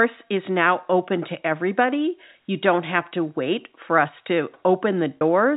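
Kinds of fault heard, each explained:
packet loss with pitch repetition: audio packets went missing and the receiver filled each hole by looping the last pitch period, so the sound briefly holds with a buzzy edge, for 20 ms at 3.09 s between "don't have" and "to wait for us", and for 40 ms at 5.17 s.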